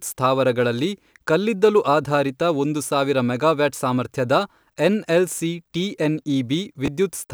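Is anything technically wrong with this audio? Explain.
Yes. Chunks out of order occur from 6.86 to 6.88 s, near the end of the speech. A short chunk of about 5.8 ms was delivered or written three chunks late, so it played after the three chunks that should have followed it. No audio is lost, but the sequence is scrambled and there are three abrupt joins. The result is a brief jumbled moment in the speech.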